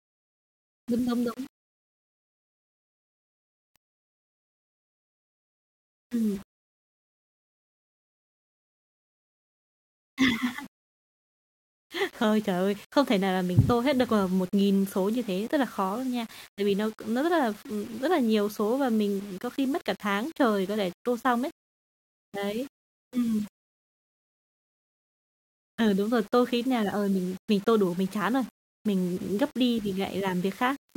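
From start to finish the speech carries a grainy, buzzing roughness that rises and falls with the voice itself. This is low bit depth without dither, likely from samples rounded to very few levels, which fits a 7-bit word. The rounding error sits roughly 30 dB below the signal, and because it follows the waveform, quiet syllables and decays turn gritty and sputter instead of fading smoothly. Unlike dithered low-resolution audio or ordinary background hiss, there is no steady noise floor; the distortion stops whenever the sound does.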